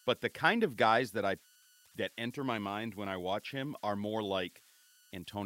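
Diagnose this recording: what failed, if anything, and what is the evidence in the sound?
A whistle around 1.5 kHz sits about 32 dB below the speech throughout: converter idle tones, an undithered delta-sigma converter stuck in repeating bit patterns.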